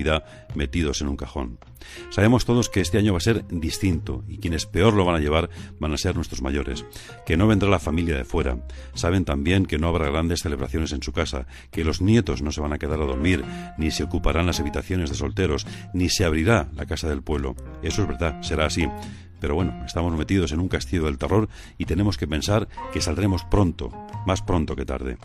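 No technical faults are audible.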